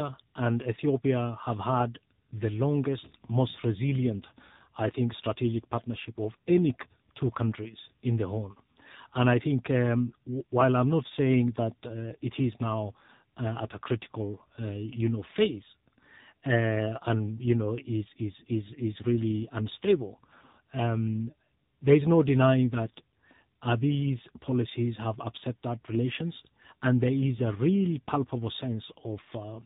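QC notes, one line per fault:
throughout, tandem speech coding: rough, muffled, warbly speech, nothing above 3.8 kHz, which fits two speech codecs in a row, CVSD then AMR-NB, the later one re-coding the earlier one's damage.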